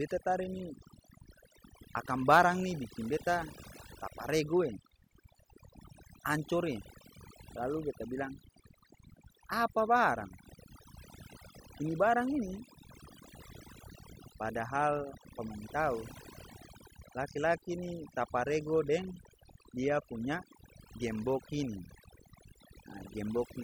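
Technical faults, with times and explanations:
Throughout: overdone noise removal. An aggressive noise reducer gates bands near its noise estimate, leaving a lowered background that breaks up into twinkling specks.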